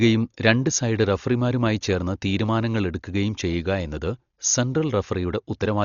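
Dolby Digital compression is the likely cause of the heavy damage throughout the speech: nothing sounds above 6.9 kHz, and rough, fluttering noise surrounds tones. This fits a bitrate near 40 kbps, where many frequency lines get no mantissa bits and are filled with dither noise.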